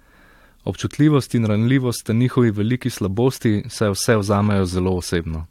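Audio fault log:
No audible faults detected.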